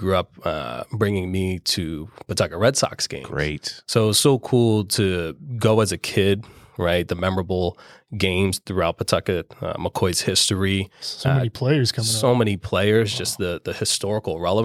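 No technical faults can be heard in this recording.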